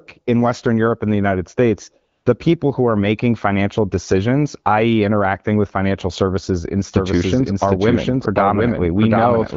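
AMR comfort noise appears from 2.11 to 2.25 s. For about 140 ms the phone treated the talker as silent and sent no speech frames. The receiver filled that gap with synthetic noise built from a rough estimate of the background's level and spectrum. For that short stretch the real background gives way to a smooth, even hiss that switches in and then out abruptly.

A doubled audio track starts at 6.94 s and runs to the end of the clip. The speech is heard a second time, roughly 0.7 s late and at about the same loudness, with no decay or room colour on the late copy. It comes in all at once. The likely cause is a second, slower capture path or an edit that left two out-of-step copies mixed together, so the final seconds sound like two overlapping takes of the same speech.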